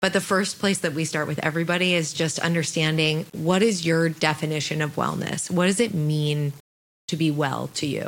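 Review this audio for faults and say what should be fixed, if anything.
Low bit depth without dither affects the speech for its whole length. The error is grainy distortion that tracks the voice, about 30 dB below the signal, growing gritty on soft syllables and sputtering or dropping out in the quietest decays and pauses. The likely cause is samples rounded to a coarse grid, which fits an 8-bit quantiser, with no dither to break the error's link to the signal. Fix it by re-rendering from a higher-resolution source, keeping 16 bits or more and applying dither before any final word-length reduction.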